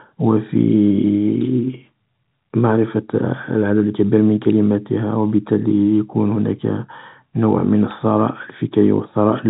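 Speech heard over a telephone-band channel, with nothing above 3.8 kHz, which fits G.711 mu-law coding at 64 kbps. At 4.50 s a single sharp snap cuts across the sound. It is very brief, a few milliseconds at most. It sits on top of the speech rather than replacing it. This is an electrical switching spike. The likely cause is a nearby switch, motor or static discharge arcing briefly, with the audio line picking up the burst.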